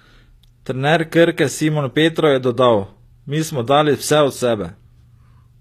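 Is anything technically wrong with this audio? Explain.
Yes. Throughout the speech, the treble appears to be rebuilt by spectral band replication rather than coded directly, likely from HE-AAC compression at a low bitrate, about 24 kbps. Copied upper bands sit misaligned with the real harmonics, so sibilants sound gritty and metallic, with nothing above 14.9 kHz.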